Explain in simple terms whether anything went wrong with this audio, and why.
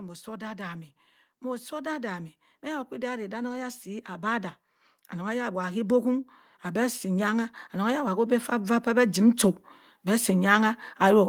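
Something did go wrong: automatic gain rising. From 0.05 s to the end at 11.28 s, the recorder judged the input too quiet and kept turning itself up. Unlike a speaker moving closer, the background swells along with the speech.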